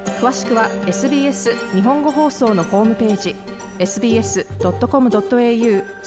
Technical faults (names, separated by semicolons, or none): none